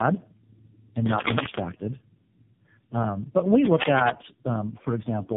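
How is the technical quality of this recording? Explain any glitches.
Technical quality is poor because of one fault present throughout. Tandem speech coding runs for the whole clip. The speech sounds like it passed through three low-rate speech codecs in a row, likely iLBC then AMR-NB twice. Each recoded the previous one's damage. Nothing remains above 3.6 kHz. The result is rough, muffled and warbly.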